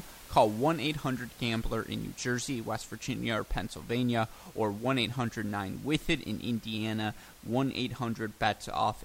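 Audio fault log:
Nothing's gone wrong with this speech recording; the only thing there besides the talking is a bit of room noise, sitting about 23 dB below the speech.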